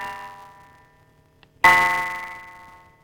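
Block size mismatch (truncated) runs throughout this music clip: each block's tail is dropped, giving a 188 Hz buzz and 1.88x faster playback at near-normal pitch, which fits a 256-sample read.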